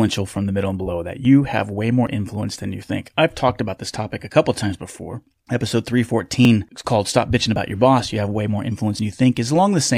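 Small forward jumps in the speech occur at 1.25 s, between "middle and below that" and "have way more influence", at 2.07 s, just before "influence than you think", and at 6.45 s, just before "it's called". Each skips roughly 10 to 20 ms with no gap, likely a dropped buffer (overrun).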